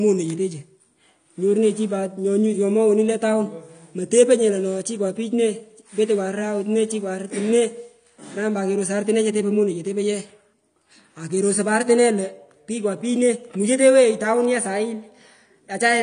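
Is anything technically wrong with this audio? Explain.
Yes. Throughout the speech there is plainly audible AAC compression damage, likely from AAC-LC encoding at a low rate. Nothing sounds above about 9.7 kHz, and the speech comes across dull and smeared, with a watery, fizzy texture on sibilants and sustained vowels. That fits a bitrate near 32 kbps: the encoder quantises each frame's spectral lines coarsely and discards the top band. On a spectrogram this shows as a hard ceiling at 9.7 kHz and patchy, flickering holes in the upper bands.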